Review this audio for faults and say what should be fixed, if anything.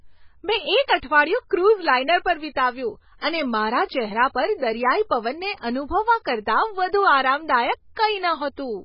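Throughout the speech, the treble stops dead at 5.5 kHz and what remains sounds watery and swirly, with s sounds turning metallic and attacks smeared. The likely cause is heavy MP3 compression, at a bitrate that fits something as low as 16 kbps. Starved of bits, the encoder cuts everything above a fixed frequency and drops weak frequency lines, which flicker on and off from frame to frame. A spectrogram would show a flat ceiling at 5.5 kHz with patchy holes beneath it, and the waveform would show softened transients. Keep the original recording or encode at a much higher bitrate to prevent it.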